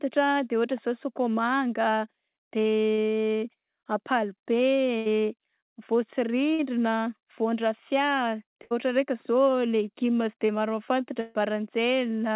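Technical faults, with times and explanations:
2.94–3.00 s, short concealed packet loss: about 40 ms of packets arrived too late, so the receiver stretched the preceding sound over the hole, leaving a brief smear before the real audio resumes.
4.98–5.07 s, burst of packet loss: about 80 ms never arrived. Concealment prolonged the last sound for roughly 78 ms, fading it into a held buzz or hiss, then playback skips ahead.
6.53–6.61 s, burst of packet loss: a 60 ms run of lost packets was bridged by about 53 ms of extrapolated, decaying sound, so that stretch of audio is missing rather than played.
8.63–8.73 s, burst of packet loss: just after "vaondrafia de", about 80 ms went missing. The receiver held and faded the last sound across the gap, then rejoined further on.
10.47–10.51 s, short concealed packet loss: right after "sy de", about 20 ms was lost and filled from the preceding sound, giving a momentary wobble in the audio.
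11.21–11.37 s, burst of packet loss: the longest gap, about 140 ms, was entirely filled by concealment rather than silence. The last sound is drawn out and decays audibly before the audio picks up past the lost part. The call path's narrow band, with nothing above 4 kHz and consistent with G.711 mu-law at 64 kbps, cuts off the high frequencies.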